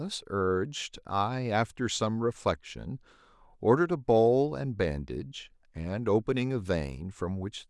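No technical faults can be heard anywhere in the speech.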